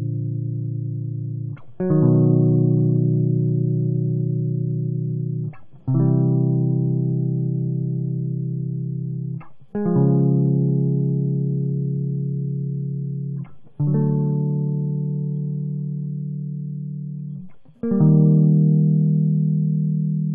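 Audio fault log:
No faults heard anywhere in this music recording.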